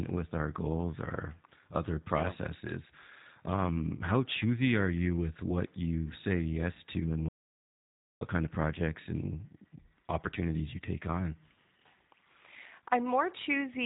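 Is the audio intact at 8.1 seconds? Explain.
No. At 8.1 seconds the speech sits inside an audio dropout to silence running from 7.29 to 8.21 s, about 0.93 s in all. The signal falls to silence with no room tone, most likely because the input was lost while the recorder kept writing empty samples.

The surrounding speech also carries plainly audible G.729 codec damage. Nothing passes above about 3.8 kHz, and the rough, slightly synthetic texture, rebuilt from a vocal tract filter and sparse pulses, points to an 8 kbit/s G.729A stream.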